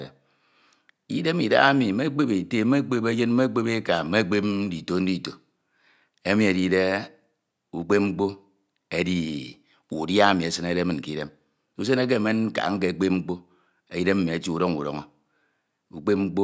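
Listening through this speech recording, nothing stood out as a technical problem, and the only thing to note is the ordinary call microphone processing, which trims the lowest bass and leaves nothing above 8 kHz.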